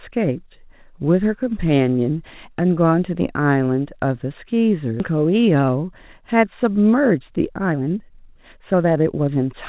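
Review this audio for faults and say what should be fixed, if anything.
At 5.00 to 5.02 s the speech jumps abruptly forward, with the two sides butted together and no silence or fill between them. This is a skip ahead: about a second and a half of audio never played. That stretch was dropped, either on the way or by the jitter buffer when it overflowed, while later audio was already queued, so playback jumped straight to the newer audio, cutting latency by the same amount in one step. Preventing it means sizing the jitter buffer for the burstiness of this network and having it shed excess delay gradually instead of dropping whole stretches.

From 5.10 to 9.54 s the speech sounds hurried, running at about 119% of normal speed while the pitch stays put. That is a jitter buffer speed-up. After the skip, the buffer still held more audio than its target, so the receiver kept cutting out short segments one or a few pitch periods long, removing roughly 0.7 s in total. 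Across the clip, nothing reaches above 4 kHz, which fits the narrowband G.711 mu-law call path at 64 kbps. Preventing it means fixing the upstream packet delay and bunching so the buffer does not build up, and capping how hard the buffer compresses time.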